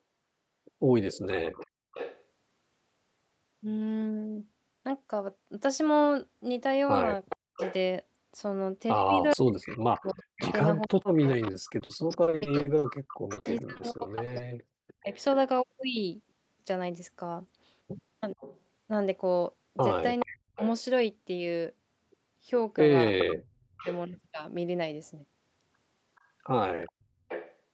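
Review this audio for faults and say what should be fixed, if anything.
Echo leak is heard from 1.12 to 2.22 s, from 7.29 to 15.2 s, and from 18.4 to 27.56 s. A delayed copy of the sound returns about 0.43 s after the original. It sits about 15 dB below the main signal in the first two stretches and climbs to about 10 dB below in the last. This is likely a far-end loudspeaker whose echo canceller let part of the playback back into its microphone. Better echo cancellation, or a headset on that end, would prevent it.

Speech suppressed in double talk occurs from 7.36 to 15.12 s and from 18.35 to 23.86 s. The level dips sharply while the returning echo overlaps the talker, at worst by roughly 40 dB, so parts of the sound nearly vanish. In the first stretch about four seconds in total are pushed down; in the second, about half a second. The likely cause is an echo canceller that could not tell the near talker from the echo, so it attenuated both. 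A canceller with better double-talk detection would stop this.

Repeated packet loss (robotic sound) runs from 11.51 to 14.41 s. Over twenty short holes fall close together, the longest about 60 ms. Each is patched by stretching the last bit of sound, so about a fifth of this span is filled-in rather than real audio. The result is choppy, with pieces missing. It overlaps the echo and suppression. A steadier network path or a larger jitter buffer would reduce it.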